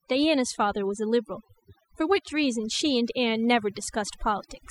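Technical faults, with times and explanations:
Throughout: overdone noise removal. Overly aggressive denoising mutes frequency bands near the noise floor along with quiet speech detail, leaving twinkling near-silence.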